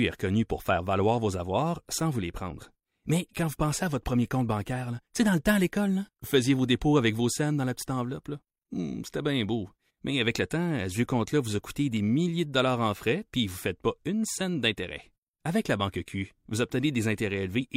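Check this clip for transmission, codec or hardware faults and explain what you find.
Checking this clip turns up no faults to explain.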